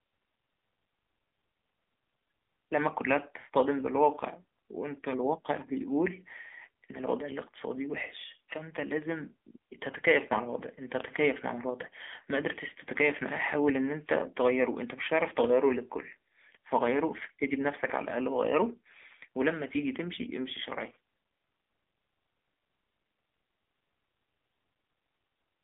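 Throughout, the speech has passed through the AMR narrowband mobile codec, which rebuilds the voice from a coarse vocal-tract model at a low bitrate, consistent with the 7.4 kbps mode. The result is a plainly buzzy, synthetic tone squeezed into a 250 Hz to 3.6 kHz line band, with nothing above 3.7 kHz. At 11.00 s an electrical switching spike, likely from a nearby switch or discharge arcing onto the line, adds a sharp snap or tight cluster of clicks on top of the speech.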